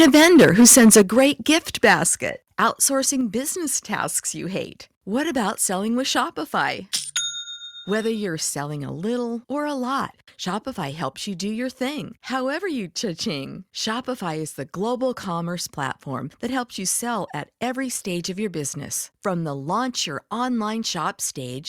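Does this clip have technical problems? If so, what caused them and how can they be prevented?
Yes. Microphone overload runs from 0 to 1.26 s, with a harsh, crackly edge on the peaks, roughly a tenth of samples flattened and about 12 dB over. Shorter bursts follow at 1.52 to 1.56 s (about 2 dB) and 1.84 to 1.94 s (about 5 dB). The input gain was likely set too hot. Set it so peaks stay well below full scale.

The microphone volume is stepped down in sudden level drops at 1.02 s (about 7 dB), 2.04 s (about 4 dB) and 3.21 s (about 3 dB). That's likely the call software's automatic gain control reacting to the clipping. Start with a sensible input level, or turn off automatic mic adjustment.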